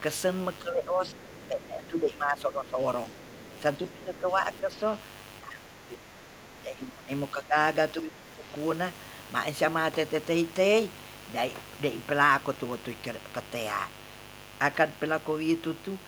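Mains buzz runs through the whole recording, a steady raspy tone about 20 dB below the speech. Switching spikes at twice the 50 Hz mains rate have leaked into the signal path, spreading harmonics up into the kilohertz range.

Speech suppressed in double talk first appears from 0.61 to 3.2 s. The talker's level sinks by about 10 dB. The likely cause is an echo canceller that, with both sides talking at once, could not tell the local voice from loudspeaker echo and turned everything down.

The other side's voice leaking through appears at 1.12 to 1.36 s and again at 3.22 to 3.61 s. A faint second voice sits about 30 dB below the talker. It is likely far-end audio from the loudspeaker that the canceller failed to remove from the microphone.

Double-talk suppression returns at 3.9 to 4.83 s, 5.4 to 7.56 s and 7.94 to 8.46 s. These dips are deeper, about 15 dB.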